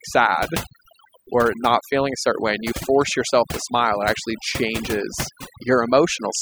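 Overdone noise removal runs through the whole speech recording: a noise reducer set far too aggressively shuts off individual frequency bands near its noise estimate, so the background drops and breaks up into twinkling specks, and quieter parts of the voice vanish.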